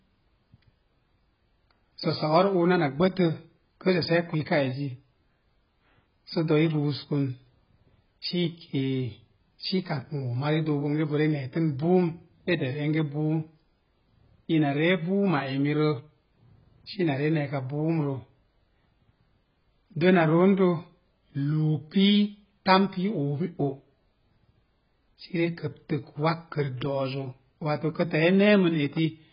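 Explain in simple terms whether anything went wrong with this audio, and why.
Yes, the speech sounds dull and smeared from start to finish, with nothing above about 5.1 kHz. The likely cause is heavy AAC compression, which saves data by discarding high frequencies and coarsely approximating the rest, leaving a warbling, fizzy texture.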